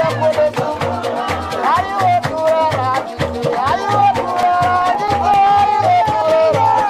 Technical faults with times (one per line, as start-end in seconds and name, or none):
4.43-5.47 CD scratch ticks
6.21 compressed frames skipped